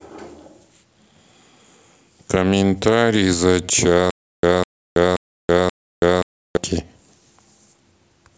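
At 4.11 to 6.57 s, stutter with silent gaps: a 203 ms fragment repeats four times between 327 ms silences, likely from stalled playback.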